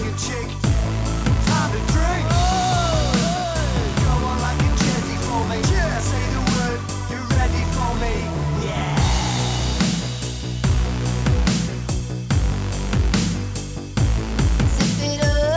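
No technical fault can be heard anywhere in this audio. Nothing in it points to a problem in how it was captured, carried or played back.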